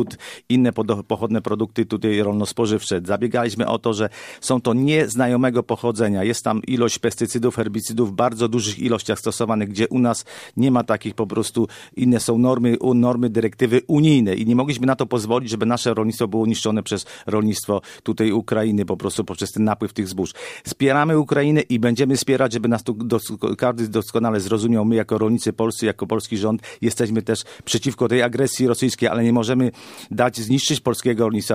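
No technical faults are audible.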